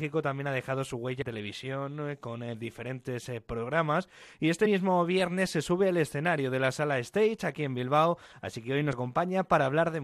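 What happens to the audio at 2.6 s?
Nothing goes wrong at 2.6 s; the audio plays through that moment intact, with no dropout, click or distortion.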